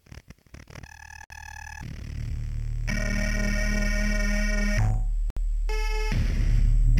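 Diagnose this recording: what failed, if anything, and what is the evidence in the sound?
The codec stage failed: the audio was encoded in separate pieces, roughly every 4 s, and joined without trimming each run's start-up delay and final-frame padding, leaving a gap at a join of encoded pieces. Continuous sound drops into silence from 1.24 to 1.30 s (about 61 ms) and again from 5.30 to 5.37 s (about 64 ms). Both edges are smeared by the codec, and the sound resumes exactly where it stopped.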